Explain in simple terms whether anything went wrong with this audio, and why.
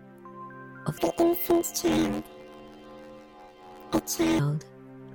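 From 0.98 to 4.4 s, planar audio read as interleaved jumbles each short stereo block, turning the sound into a robotic buzz 86 times a second.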